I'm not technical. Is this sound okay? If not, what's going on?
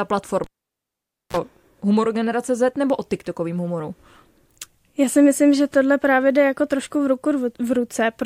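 No. At 0.44 s a cable was pulled and plugged in: a pop, about 0.88 s of near silence, a brief 60 Hz mains buzz as the plug touched, then another pop at 1.37 s before "humoru generace". Unlike a simple dropout, those pops and buzz give it away.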